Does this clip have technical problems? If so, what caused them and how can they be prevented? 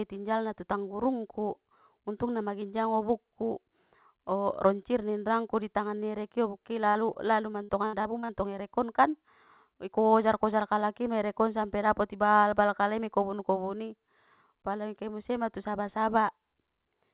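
Yes. A burst of packet loss at 6.89 to 6.98 s: the receiver stretches the last sound for 60 ms as a fading buzz or hiss, then resumes with roughly 60 ms skipped. Forward error correction or redundant packets would let the receiver rebuild a run of lost packets like this.

Short concealed packet loss at 7.13 to 7.18 s: about 30 ms never arrives, so a 24 ms patch continues the preceding sound, leaving a brief smear. A larger jitter buffer would give late packets time to arrive before they have to be patched over.

Repeated packet loss (robotic sound) from 7.63 to 8.32 s: five gaps, the longest 62 ms, are patched in quick succession, covering about 30% of the stretch with choppy sound with pieces missing. A more stable network path or adaptive bitrate with redundancy would stop these losses from recurring so closely together.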